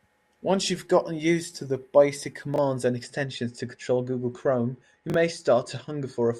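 A speech clip with two faults. Chunks out of order occur at 2.54–2.58 s and 5.10–5.14 s. Each time, a chunk of about 21 ms plays one position late, giving a brief jumbled stutter with hard joins. Unlike a dropout, no audio goes missing; it is only rearranged. From 3.03 s to the end, channel delay (comb filtering) dulls the top of the sound. One channel lags the other by roughly two samples, a few hundredths of a millisecond, so the mono sum cancels near 10 kHz. That is a notch, not a low-pass roll-off, so the frequencies above it come back.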